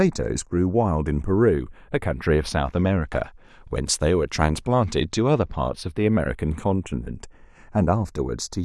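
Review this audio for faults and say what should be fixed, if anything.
Slow flanging runs throughout in mono: channels drifting apart, separate device clocks about 40 ppm off sliding the delay toward 0.2 ms. Lock both recorders to a shared word clock, or capture both channels through one interface.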